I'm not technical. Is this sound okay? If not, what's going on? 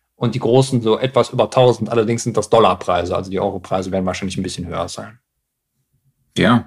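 Yes, nothing in this speech recording sounds wrong, so there's nothing to worry about here.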